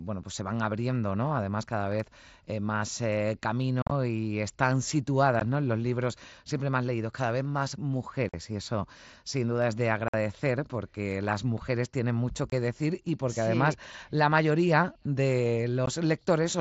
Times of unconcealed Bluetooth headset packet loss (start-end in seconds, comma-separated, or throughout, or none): 3.82-3.91, 5.40, 8.29-8.34, 10.08-10.14, 12.50-12.52, 15.86